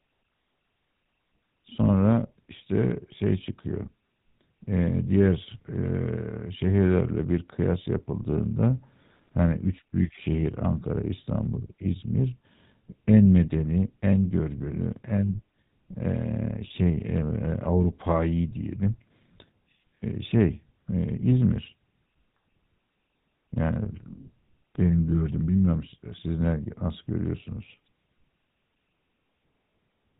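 Speech carrying plainly audible GSM full-rate codec damage throughout: a buzzy, gravelly roughness from the pulse-driven vocal-tract model, with nothing above 4 kHz. The coarse texture and band limit point to the original 13 kbps GSM speech codec.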